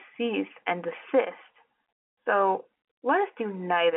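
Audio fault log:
No faults to log; the speech carries the ordinary narrow band of a telephone line, with nothing above about 3.8 kHz.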